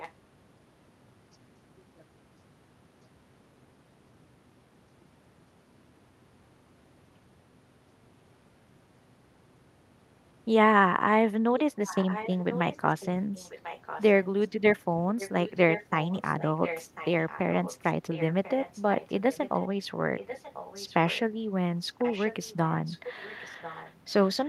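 A faint copy of the speech returns about 1.04 s late, around 15 dB below it, at 0.00–0.13, 11.59–14.48, 15.18–19.68, 20.18–21.20 and 21.92–24.48 s. This echo leak is likely a far-end loudspeaker's echo canceller letting its microphone pickup through. Unlike room reverberation, the copy arrives as a distinct repeat a full second behind, not a smear trailing the speech.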